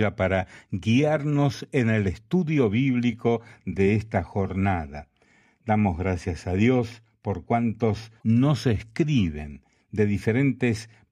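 At 8.17 s a brief glitch lasting 0.07 s breaks through: damaged data in the compressed stream, where corrupted frames make the decoder lose sync.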